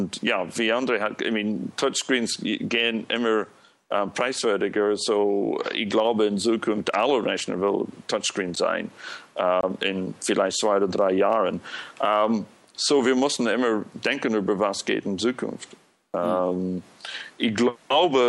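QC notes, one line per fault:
8.56 and 9.61 to 9.63 s, block of digital silence: the audio drops straight to silence and snaps back with no fade. The first hole is 11 ms, heard as a tick, which fits a missed 512-sample buffer. The second is 24 ms, long enough to register as a tiny gap.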